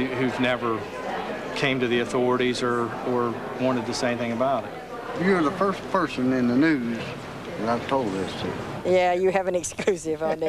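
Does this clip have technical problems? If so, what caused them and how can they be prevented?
No, nothing in this one sounds technically off, so there's no problem to explain and nothing here that needs preventing.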